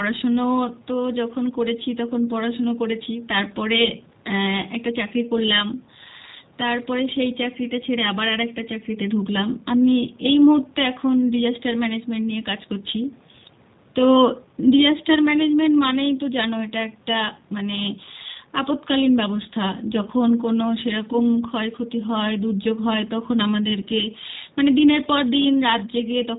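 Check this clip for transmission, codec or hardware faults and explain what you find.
There's one codec fault, running through the whole speech clip. G.729 codec damage is plainly audible: speech is rebuilt from a filter, pitch predictor and a few pulses per frame. Nothing above 4 kHz survives, and it sounds rough and synthetic, which fits an 8 kbit/s stream.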